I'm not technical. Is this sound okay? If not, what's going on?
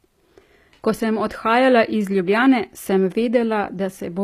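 No. Compression damage is plainly audible from start to finish. The sound is most likely HE-AAC compression, a way of shrinking audio files. It stores only the lower part of the sound properly. The treble is rebuilt by copying lower parts upward, so it is a guess at the original. That is why the s sounds in this speech come out gritty, lispy or metallic. Nothing at all is left above about 15 kHz.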